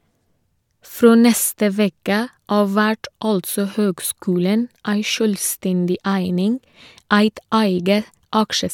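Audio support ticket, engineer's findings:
No audible faults found in this speech recording.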